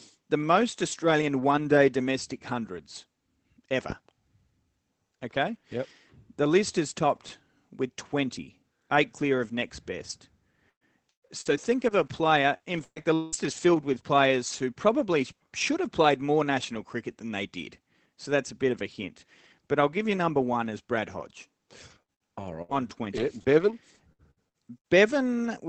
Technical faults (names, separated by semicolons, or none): loud pop; repeated packet loss (robotic sound)